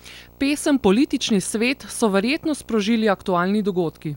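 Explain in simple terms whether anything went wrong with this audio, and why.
A video or display buzz runs under the speech for the entire clip. A screen or video cable has leaked its signal into the audio path. The result is a low buzz at 59.94 Hz, the picture's field rate, with a gritty hash on top, plus a thin, very high whine at 15.7 kHz from the line rate. It sits well below the speech but is steady throughout.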